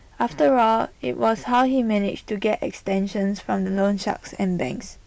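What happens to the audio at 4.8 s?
Nothing goes wrong at 4.8 s: the speech carries on intact there, with no dropout, click, distortion or other fault at that moment.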